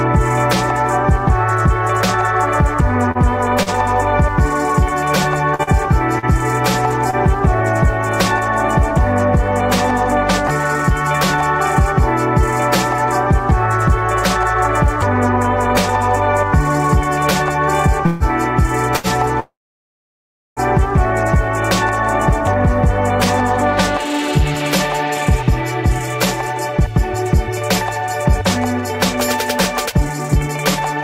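At 3.11 and 3.63 s, short stalls from a late packet each hold the sound about 36 ms while the jitter buffer waits, leaving a brief smeared drag. From 5.5 to 7.2 s, repeated packet loss gives a choppy texture: four gaps, the longest 43 ms, patched by continuing prior sound, with about 120 ms missing. At 18.06 to 18.23 s the sound stretches into a fading buzz for 142 ms, a call audio freeze likely caused by packets held in transit emptying the jitter buffer. A 74 ms short stall follows at 18.96 s. A longer call audio freeze runs 19.4 to 20.6 s, with about 1.2 s inserted, mostly 1.05 s of silence, before playback resumes where it stopped. From 22.3 s to the end, a jitter buffer speed-up trims pitch-period slices to reduce the accumulated delay, running about 2% fast at unchanged pitch and removing roughly a fifth of a second.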